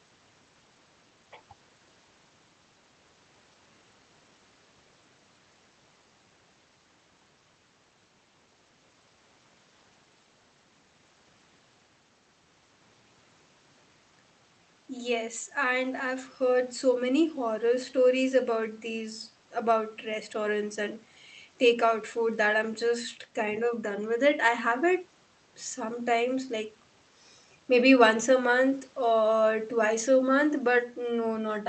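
Speech with no technical faults. It has passed through a WebRTC call path, and the top end stops at about 8 kHz, which fits wideband Opus coding.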